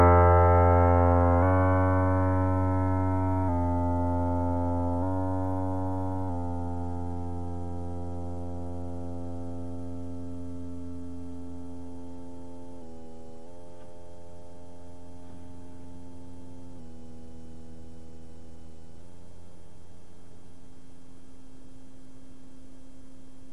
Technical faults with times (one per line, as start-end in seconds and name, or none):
16.79-19.01 drift correction step